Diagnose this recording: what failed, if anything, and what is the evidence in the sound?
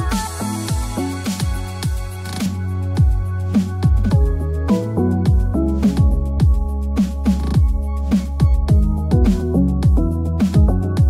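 De-emphasis applied wrongly, from 2.46 s to the end: the sound turns dull and muffled as a treble cut takes hold, rolling smoothly down to about 11 dB below 1 kHz by 10 kHz. A playback de-emphasis filter is either undoing pre-emphasis that was never applied or cutting treble a second time.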